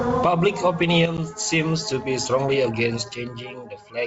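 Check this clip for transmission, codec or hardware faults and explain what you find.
One real fault in this speech clip: packet loss on an ADPCM call, between 1.17 and 1.19 s. About 10 ms of audio, roughly a single packet, drops out and is filled with silence, leaving a hard-edged little hole. Because ADPCM decoding relies on a predictor and step size that track the sender's, that gap knocks the decoder out of step. The speech comes back slightly distorted before it settles. The underlying G.722 wideband coding sounds like it's running at 64 kbit/s.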